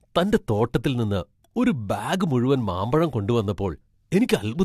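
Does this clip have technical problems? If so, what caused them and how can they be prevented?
Yes. Throughout, the speech sounds swirly, smeared and hollow, with blurred consonant onsets and no content above 14.2 kHz. This is likely generation loss from about three successive lossy AAC encodes at a rate that fits 64 kbit/s, each quantising on a fresh frame grid so the errors stack. To prevent it, keep a lossless master and encode to AAC only once at the final step.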